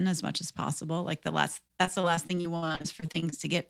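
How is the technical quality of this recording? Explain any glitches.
Repeated packet loss (robotic sound) degrades the speech from 1.67 to 3.34 s, just after "the last." Unlike a single dropout, the gaps keep recurring, each up to 60 ms. About a quarter is patched by extending the previous sound, giving a choppy, robotic texture with pieces missing.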